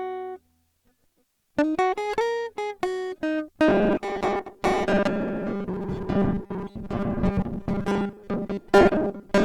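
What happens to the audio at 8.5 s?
At 8.5 s the music is still in the robotic sound from repeated short buffers that starts at 3.68 s and runs to the end. The likely cause is audio arriving too seldom, so a 5 ms stretch is looped over and over while most of the real signal is skipped, stamping a fixed 200 Hz buzz on everything. Unlike a pitch shift, that buzz stays rigid while the music's own movement only loosely shows through.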